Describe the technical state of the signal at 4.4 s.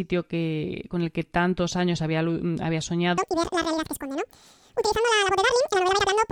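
At 4.4 s the speech is being read two samples at a time (double speed), a fault running from 3.18 s to the end at 6.32 s. Each pair of samples is taken as a single frame, so the sound plays twice as fast and 12 semitones higher. A spectrogram shows formants shifted up an octave. The waveform shows syllables compressed to half their length.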